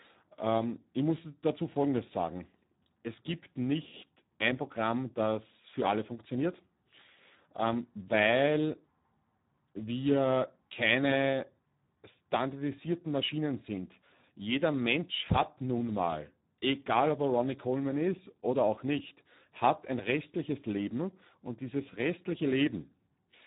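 From start to finish the speech carries Speex codec damage, and it is heavy. The CELP coder has so few bits for the excitation that voices turn hoarse and noisy, which points to a rate around 8 kbps. On a spectrogram, energy stops abruptly near 3.8 kHz with nothing above, and the harmonic striations below look smeared and grainy rather than clean.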